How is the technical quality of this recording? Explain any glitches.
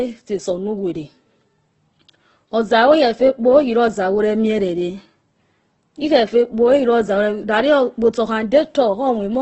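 The technical quality is poor, with heavy low-bitrate compression damage throughout.

Opus compression, throughout the clip: the speech has nothing above 8.1 kHz and sounds rough and grainy. That is likely a music-mode Opus encoder at roughly 12 kbps, too few bits per band, so band energy is kept but the detail is replaced with noise.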